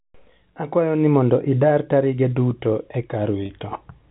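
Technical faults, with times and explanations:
3.41–3.49 s packet loss with pitch repetition: 60 ms lost in short gaps, longest 30 ms. Replayed pitch cycles sound buzzy and held, showing as identical waveform periods and frozen harmonic stripes.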